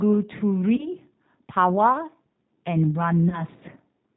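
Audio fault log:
Throughout: G.729 codec. The speech is heard through an 8 kbit/s codec that rebuilds each 10 ms frame from a vocal tract filter, a pitch predictor and a few pulses. Nothing above 4 kHz survives. The voice is plainly rough and synthetic.
0.76–0.88 s and 3.29–3.44 s: VoIP packet loss concealed by the speech codec. Each time, 30 ms of audio goes missing, which fits one lost packet. The decoder stretches the last sound into a fading buzzy tone or coloured noise. Because each frame builds on the previous one, the voice stays weak or distorted until about 0.88 s and 3.44 s.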